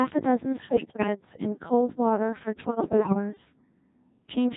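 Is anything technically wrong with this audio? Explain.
Yes. Throughout, the speech is carried by the Codec 2 vocoder, and its sound fits a rate near 1.6 kbit/s. Only pitch, voicing, energy and envelope are sent, and sine-wave resynthesis makes it robotic and buzzy, unlike ordinary codec smearing. Bit errors on digital voice radio hit 0.65 to 1.07 s and 2.6 to 3.14 s, with roughly one bit in ten flipped in the later burst. Corrupted frame parameters produce sudden pitch jumps, warbles and bleeping gibberish rather than the silent gaps of lost packets.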